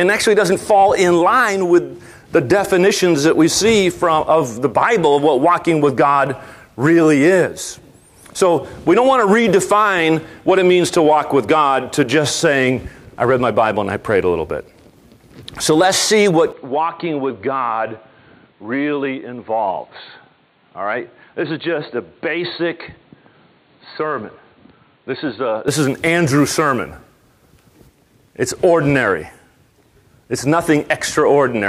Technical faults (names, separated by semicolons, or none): input switched to a poorer device